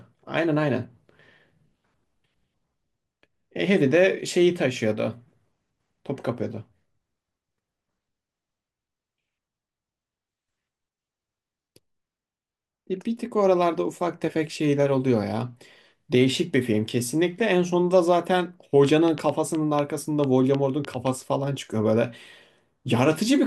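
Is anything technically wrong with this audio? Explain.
Yes. A train of clicks runs from 18.85 to 21.08 s. About five clicks a second arrive at an uneven pace, roughly ten in all. Each is a near-identical pulse, likely from interference or a faltering interface. They tick sharply, standing well above the speech.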